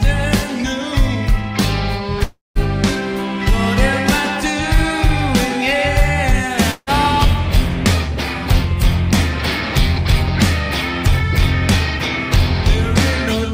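Two gaps break the audio, each sounding like a long network dropout. From 2.23 to 2.58 s the last sound is carried on as a fading buzz for about 0.3 s before settling into near-silence, and the audio resumes with roughly 320 ms of material missing. At 6.71 to 6.90 s the same pattern recurs more briefly, with about 160 ms lost. The likely cause is packets failing to arrive, with the receiver concealing the loss.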